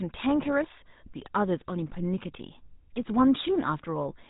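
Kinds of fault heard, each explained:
GSM full-rate codec: The whole clip has been through the original GSM speech coder, which fits a 13 kbit/s stream. It doesn't store the waveform. It models the vocal tract as a filter and drives it with a thinned-out pulse train, keeping only every third excitation sample. You can plainly hear it as a buzzy, gravelly roughness on the speech throughout, and the top end is gone, with nothing above about 3.8 kHz.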